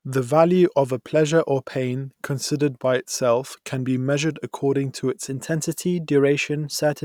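From 5.29 s to the end of the clip, clock-matching software likely stepped the playback rate up in one jump to correct accumulated drift between two clocks, a drift correction step. Because speed and pitch change together, the speech runs about 5.6% faster and sits 94 cents higher, close to a full semitone. The voice suddenly sounds clearly detuned and hurried, and it stays shifted through the final moments rather than settling back.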